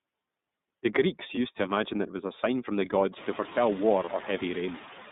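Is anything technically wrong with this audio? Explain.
Yes. Three faults are audible.

Noise suppressor artifacts run throughout. Bands judged to be steady noise are cut by about 20 dB frame by frame, so the background dips between phrases and swells under speech, most clearly after the room noise rises about three seconds in. On a spectrogram the residue shows as blotchy, flickering noise patches.

The iLBC codec also runs throughout. Speech is confined to roughly 150 Hz to 3.7 kHz with plainly audible roughness and a synthetic edge, which fits iLBC's 30 ms, 13.33 kbps mode. A spectrogram shows a hard ceiling near 3.7 kHz.

Lost iLBC frames occur from 4.04 to 4.10 s, a 30 ms gap consistent with a single dropped frame. The decoder repeats the last pitch cycle mixed with noise, giving a brief buzzy, held sound. The waveform shows a short repetitive stretch before normal speech resumes immediately.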